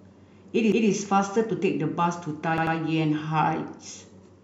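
Repeated frames: the compressed stream delivered the same data more than once, so the decoder replays it as a stutter. From 0.72 to 0.91 s a 185.8 ms block plays twice; from 2.58 to 2.77 s a 92.9 ms block plays three times, each adding 185.8 ms.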